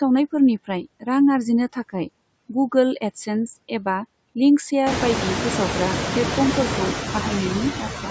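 The noise suppressor artifacts run through the whole clip. The suppressor pulls the steady background down by about 19 dB, frame by frame, so the noise dips away between phrases and comes back up under the speech. The room noise climbs by about 22 dB near 5 s, sitting only about 6 dB below the speech.

Right at the end, from 7.79 s to 8.11 s, there's speech cut by the noise suppressor. It mistakes part of the speech for background and turns it down by as much as about 12 dB, around 150 ms in all, so those last sounds come across swallowed and faint.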